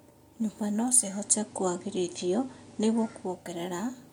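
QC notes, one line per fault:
0.84–3.63 s: digital radio blending to analogue. The receiver lost the digital stream and faded across to the station's FM broadcast over about 470 ms, then returned later. During the FM stretch a steady hiss sits roughly 35 dB below the speech. The level shifts by about 2 dB, because the two paths are not matched in gain.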